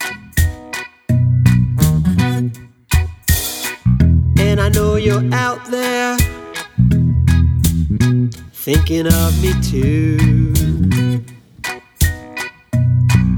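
No technical faults occur at any point in the clip, so there is nothing to place in time order.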